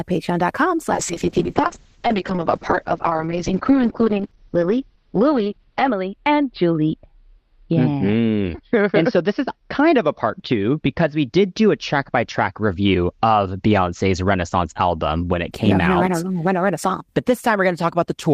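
From 0.94 to 15.57 s a call bitrate drop strips the speech above 6 kHz and leaves it coarse and watery. The bitrate falls from 32 to 7 kbps, and the sound recovers as the rate climbs back, unlike a fixed low-pass filter.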